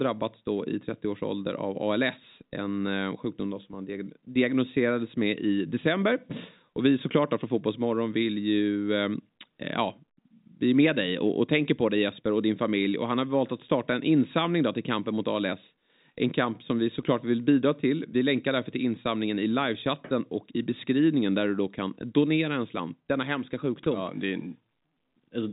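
Nothing in this recording stands out as a technical fault, so there's nothing to flag here.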